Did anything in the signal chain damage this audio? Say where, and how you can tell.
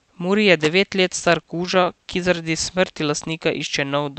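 Yes. Loose connector crackle in the analogue wiring at 0.60–0.68 s. An intermittent contact chopped the signal, leaving jagged waveform spikes and broadband vertical spectrogram streaks.

Repeated stalls (stutter) at the network jitter buffer, 1.19–2.47 s. Twelve brief underruns, each 12 ms or less, were filled by extending prior sound. It drags without gaps, showing repeated waveform cycles.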